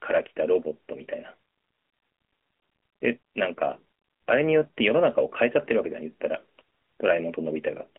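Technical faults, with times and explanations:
Throughout, AMR narrowband mobile codec: the speech is squeezed into a phone-line band of about 250 Hz to 3.5 kHz, with nothing above 3.7 kHz. At 10.2 kbps the vocal-tract model and sparse pulses leave a plainly audible buzzy, synthetic edge.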